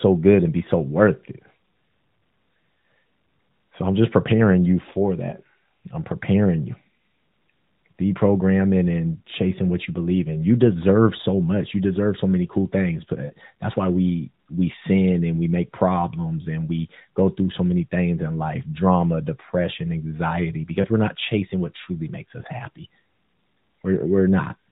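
Speech, heard through a narrowband mobile channel with the muffled top end and light coloring of AMR narrowband at its 12.2 kbps mode, has three short glitches: a smeared, warbling dip from 13.26 to 13.32 s and briefer dips at 20.82 to 20.87 s and 22.42 to 22.47 s. These are lost AMR speech frames. Radio errors corrupted the frames, and the decoder stretched the last good pitch and vocal tract settings with falling gain to cover the gaps, about 40 ms at 13.26 s and 20 ms at the others.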